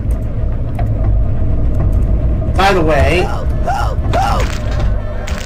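Hard clipping runs through the whole clip. The signal reaches a stage about 6 dB hotter than it can pass, so every peak is cut off flat. Only a small share of samples, around four percent, sit at that ceiling, so the damage lands on the loudest moments as a gritty crackle. On a waveform the peaks look squared off against a fixed level, and a spectrogram shows bright vertical smears of high harmonics at each clipped peak.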